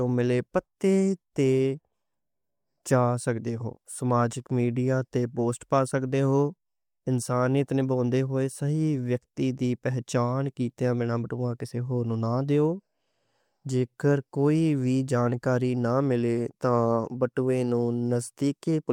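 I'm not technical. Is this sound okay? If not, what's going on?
Yes, this speech sounds fine, with no problems heard.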